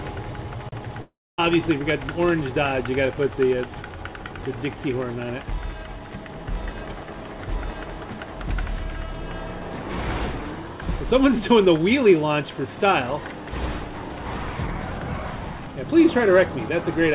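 At 1.02 s the sound breaks off and doesn't properly return until about 1.40 s, which sounds like a long network dropout. For roughly the first tenth of a second, the receiver papers over the gap by stretching the last bit of sound into a fading buzz or hiss, then it drops to near silence for about 250 ms. When the audio picks back up, around 360 ms of material is simply gone. The band tops out at 4 kHz throughout, which fits the G.711 call codec, but the gap itself is most likely packet loss on the network.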